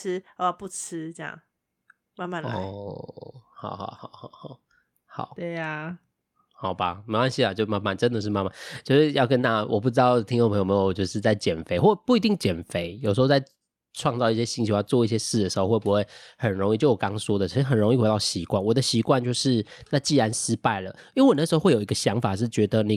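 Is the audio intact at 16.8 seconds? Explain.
Yes, the speech at 16.8 seconds plays through cleanly, with no audible fault at that moment.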